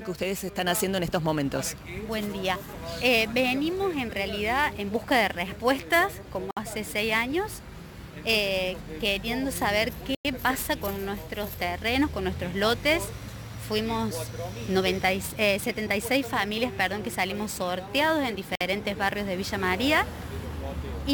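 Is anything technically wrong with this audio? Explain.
Yes, there are two separate problems.

The first runs the whole way through: sample clock jitter. The converter's clock is wobbling, on the order of several microseconds, so each sample lands a touch early or late. That timing error costs the most where the waveform moves fastest, giving a grainy hiss or roughness that sits roughly 20 dB under the signal. It gets stronger on loud, bright passages and disappears when things go quiet.

The second is a set of three short dropouts: at 6.51 s for about 58 ms, at 10.15 s for a full 100 ms, and at 18.55 s for about 54 ms. The sound cuts to dead silence and then carries on. That pattern points to a likely Bluetooth stall, where interference holds up packets, the headphones' buffer runs empty, and playback stops until the resent data arrives.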